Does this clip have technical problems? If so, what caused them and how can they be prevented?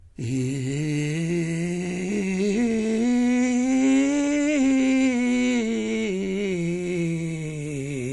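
Yes. This music has the smeared, swirly top end of transcoding between lossy codecs all the way through, with nothing above 11.3 kHz. It most likely passed through a low-rate MP3, something around 48 kbit/s, and was then re-encoded as WMA near 64 kbit/s. The second encoder wasted bits on the first one's artefacts and added its own, so both sets layer together. To prevent this, always encode once from the original lossless master.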